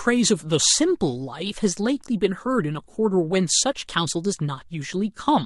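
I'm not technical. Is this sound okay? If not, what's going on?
Yes, no technical faults can be heard in this speech recording.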